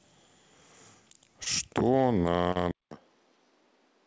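Speech carried over a call link whose band ends at 8 kHz, which fits a G.722 wideband codec. There are two short concealed packet losses. The first runs from 1.44 to 1.48 s and the second from 2.52 to 2.58 s. In each, audio arrived too late to decode. The receiver extended the preceding sound to cover the hole and then blended back. This leaves a brief smear or wobble. The second gap is about 40 ms, twice the first. At 2.71 s the sound drops out for about 200 ms. It returns duller and boxier, with nothing above 6.1 kHz. It is also roughly 10 dB quieter, with a new noise floor well below the speech. This points to the input switching to a poorer device.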